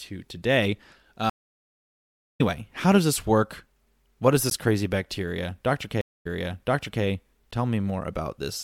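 Stream reconnect at 1.30 to 2.41 s: the connection dropped, leaving about 1.09 s of silence, and a fresh decoder picked up mid-stream roughly a second further on, so that stretch of speech is skipped. Gap between chunks at 4.50 s: a 13 ms hole falls where one 3 s chunk ends and the next begins, interrupting the sound without losing any. A second stream reconnect at 6.01 to 7.03 s brings 238 ms of silence, then playback resumes 784 ms earlier, repeating audio already heard. Another 13 ms chunk gap follows at 7.51 s, exactly 3 s after the first.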